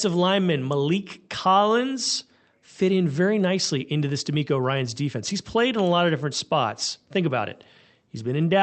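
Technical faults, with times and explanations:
No technical faults heard.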